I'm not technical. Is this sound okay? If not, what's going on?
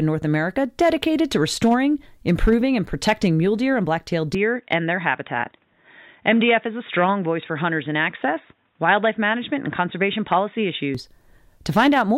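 No. From 4.35 to 10.95 seconds, the recording's input most likely switched to a poorer device, such as a different microphone or a headset in call mode, and then switched back. That device captures a narrower range of sound, cutting everything above about 3.8 kHz, so the speech turns dull and boxy for that stretch and then clears again. The switch is seamless, with no gap and no jump in loudness, but a faint new background noise comes in with it.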